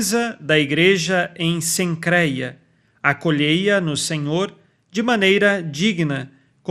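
Throughout, the speech is dull, gurgling and granular, likely MP2 compression near 80 kbps; a spectrogram shows upper bands flickering on and off.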